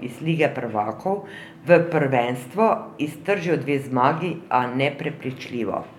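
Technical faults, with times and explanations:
No technical faults are audible in this speech recording.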